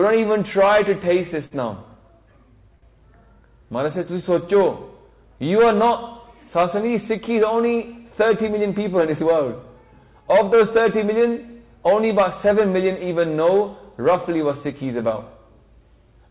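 The audio passes through a call codec whose output stops at 4 kHz, and it shows two short stalls from a late packet, at 1.46 to 1.54 s and 2.75 to 2.85 s. The jitter buffer ran dry, so the last sound is stretched for about 50 ms and then 74 ms before playback resumes. Unlike a dropout, nothing is lost; the sound is simply held too long. From 8.51 to 9.24 s a jitter buffer speed-up trims short pitch-period slices, about 70 ms in total, so the audio runs about 9% fast at an unchanged pitch. The unchanged pitch is what separates this from a resampling error.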